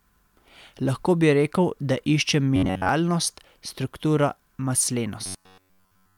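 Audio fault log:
2.56–2.89 s and 5.26–6.17 s: robotic sound from repeated short buffers. The speech becomes a rigid metallic buzz at 93.8 Hz, mostly in the first stretch and completely to the end. This likely comes from a roughly 10.7 ms buffer being looped. A spectrogram shows flat, evenly spaced harmonic lines, and the waveform shows identical cycles.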